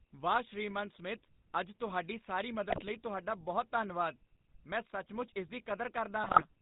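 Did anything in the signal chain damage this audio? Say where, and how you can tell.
Yes. The codec stage left a GSM full-rate codec signature throughout: a buzzy, gravelly roughness and nothing above 4 kHz, consistent with a 13 kbps link. Unlike generic low-bitrate hiss or smearing, the grit comes from pulse-driven excitation through a vocal-tract filter.

Two bursts of GSM bit errors point to a weak radio link: squawks and gargling from 2.70 to 2.84 s, just after "ਅੱਜ ਤੁਹਾਡੀ ਸਾਰੀ", and from 6.24 to 6.43 s. Corrupted filter, pitch and gain values distort frames rather than silencing them, which separates this from packet loss.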